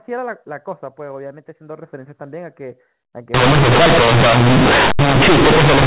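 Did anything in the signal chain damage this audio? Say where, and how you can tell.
Yes. From 3.34 s to the end, the damage comes from a sample-format conversion: companded audio is read as linear. The telephone-band sound, cut off at 4 kHz as A-law coding would leave it, suddenly turns into very loud, buzzy distortion, and the pauses fill with strong noise. Because the logarithmic A-law bytes are never expanded, each sign change throws the output across about half its range, so quiet passages come out as large as loud ones. Overload clipping would flatten only the peaks and leave the gaps quiet.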